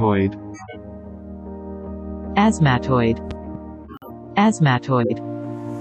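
From 0.54 to 0.76 s a corrupt frame decoded fault produces a short chirpy, squeaky burst lasting about 0.22 s, which fits a few damaged frames. Flipped bits made the decoder apply wrong gains or codes, so the energy lands at frequencies where it doesn't belong. The error peaks at roughly -20 dBFS. Unlike a muted frame, it adds sound instead of removing it.

Between 3.31 and 3.57 s a loud pop occurs: two sharp pops, each a few dB above the surrounding sound, while the audio carries on underneath. The likely cause is a sudden voltage step or pulse from a plug, switch, static or driver glitch, shaped by the circuitry after it. Unlike a decoding error, it is a brief pulse rather than garbled spectral content.

From 3.84 to 4.10 s a corrupt frame muted fault cuts the sound abruptly into silence for about 0.27 s, which points to roughly five rejected frames. The decoder refused the damaged frames and the player filled the gap with silence, so timing is preserved. 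It is a hole, not a burst.

At 5.01 to 5.12 s a second corrupt frame decoded fault gives a shorter burst of about 0.11 s, spanning around two frames. It is much louder than the first, with errors reaching roughly -5 dBFS.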